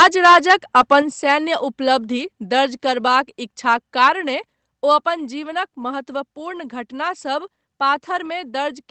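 From the start to 0.96 s the speech has a harsh, crackling edge on its loudest syllables, which points to microphone overload: the input was likely set so high that peaks ran about 10 dB past the converter's ceiling. On a waveform a noticeable share of the samples sit flattened at a common level, and a spectrogram shows broadband smears of distortion rising above the speech harmonics, up to the roughly 8 kHz top of the call band.

At 1.02 s the speech and the background drop together in one abrupt step of about 5 dB. This is a microphone volume stepped down, most likely the call software cutting the input gain in reaction to the clipped opening. The waveform envelope shrinks instantly, like a stair, rather than fading. On a spectrogram every frequency band, noise floor included, darkens at the same moment.

Around 1.3 s the microphone overload returns briefly at a milder level, about 2 dB over the converter's limit. 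It adds a short crackle and leaves a few flat-topped samples on the waveform, with a faint broadband flash on the spectrogram.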